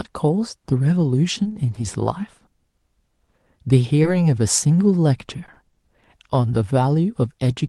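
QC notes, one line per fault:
1.43–1.79 s, repeated packet loss (robotic sound): four short holes in quick succession, none longer than 20 ms, with about 80 ms of patched audio across the run and about 60 ms of real signal never heard. Each gap is filled by extending the preceding sound, and the next arrives before the decoder settles, so roughly a quarter of this stretch is synthetic. The result is choppy.
2.39–2.43 s and 2.71–2.75 s, short concealed packet loss: two isolated drop-outs, each replacing 20 ms of signal with a 20 ms fill. The receiver bridges each hole by continuing the last sound, pitched if voiced and as shaped noise if not, then cross-fades back into real audio. Each is heard as a brief smear or wobble, and a short consonant falling inside could be lost. The audio here is band-limited near 12 kHz, as an Opus call path would leave it.
5.46–6.04 s, repeated packet loss (robotic sound): a second cluster of four gaps, again no longer than 20 ms each, spread over a longer span. 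About 60 ms is concealment and about 20 ms of real signal is missing, so only around a tenth of the stretch is filled. The repeated patching still gives an intermittent robotic wobble, lighter than the earlier run.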